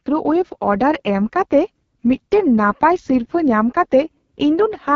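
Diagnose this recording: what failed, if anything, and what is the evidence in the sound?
Rough, raspy speech throughout with a dull top, nothing above about 7.3 kHz: an AMR wideband (HD Voice) codec, whose heavy coding damage fits its lowest mode, about 6.6 kbit/s.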